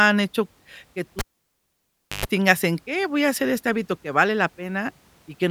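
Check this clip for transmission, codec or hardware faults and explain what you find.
One hardware fault is present in the speech. A cable pulled and plugged in at 1.19–2.26 s: pop, 1.02 s near silence, 115 ms of 50 Hz buzz as the tip touches, then a pop. The waveform shows spikes around the gap, and the spectrogram shows horizontal mains harmonics.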